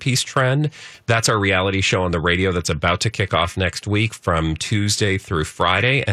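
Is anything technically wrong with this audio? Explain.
No, nothing technically wrong turns up anywhere in this speech recording.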